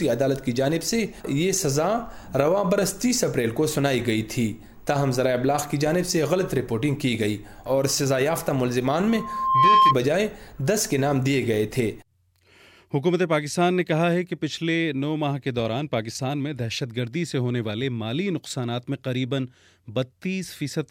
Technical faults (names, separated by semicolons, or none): loudspeaker feedback squeal